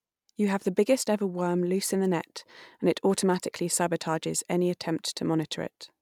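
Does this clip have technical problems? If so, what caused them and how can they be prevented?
No, this recording has no technical problems to address.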